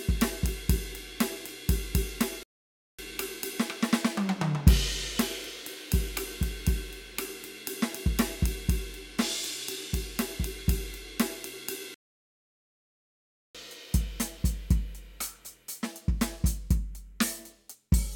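A music clip with two playback stalls. The sound cuts to silence at 2.43 s for about 0.55 s. It does so again at 11.94 s, this time for about 1.6 s. The likely cause is the player running out of data or its thread being blocked.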